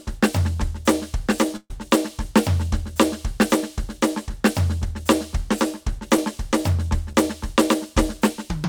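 At 1.56 to 1.71 s there is a burst of packet loss. About 130 ms of the music never arrived. The receiver stretched the last sound across the hole and faded it, then about 40 ms of silence followed. The music resumes further on.

Short concealed packet loss follows at 6.17 s and again from 7.13 to 7.15 s. Each time, about 10 ms went missing. The decoder filled it by continuing the preceding sound, then blended back. Each is heard as a brief smear or wobble.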